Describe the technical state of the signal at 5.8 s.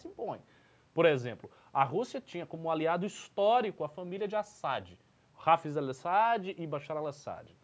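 At 5.8 s the speech signal is intact, with nothing wrong beyond the normal band-limiting of call microphone processing, which trims the lowest bass and leaves nothing above 8 kHz.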